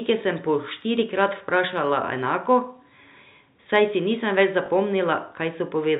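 At 4.66 to 4.68 s the speech catches on a brief packet loss with the last packet repeated: about 20 ms of audio went missing, which points to a single lost packet, and the receiver filled the gap by replaying the previous one. The repeat sounds like a small blip. On a waveform the repeated segment shows as an identical block. On a spectrogram the telephone band stops at 4 kHz.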